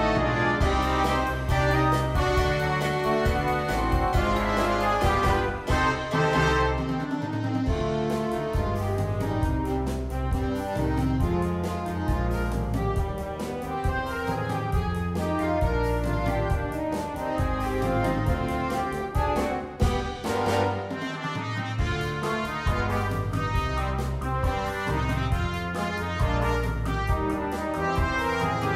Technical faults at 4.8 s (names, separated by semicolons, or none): none